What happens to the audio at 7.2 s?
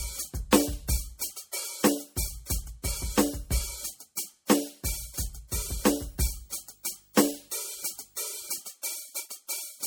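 At 7.2 s the music carries a low 50 Hz buzz with a fizzy hash above it and a faint, very high whine at 15.6 kHz, sitting roughly 35 dB below the music. This is video or display buzz, running from 6.09 s to 8.60 s. A screen or video cable is coupling its picture field rate and line scanning into the audio path.

Underneath, and throughout the clip, the music has the smeared, swirly texture of heavy MP3 compression even though content reaches up to 20.1 kHz. This is likely low-bitrate audio saved at a high bitrate: a low-rate MP3 re-encoded at a much higher rate, which keeps the first encoding's damage without restoring anything it removed.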